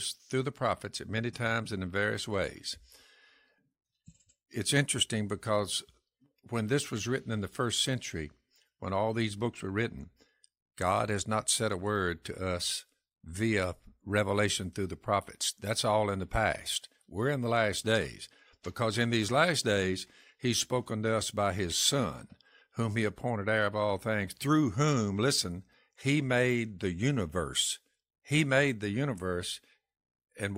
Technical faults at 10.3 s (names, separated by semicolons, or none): none